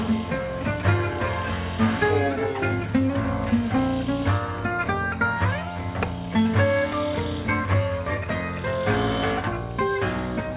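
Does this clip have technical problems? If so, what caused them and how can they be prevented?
Yes, there's a wrong sample rate problem running through the whole clip. Everything plays at half speed and a full octave (12 semitones) low, so the sound drags and sags. That fits 16 kHz audio being played back as 8 kHz with no conversion. To prevent it, make sure the playback rate matches the file's header or resample properly before output.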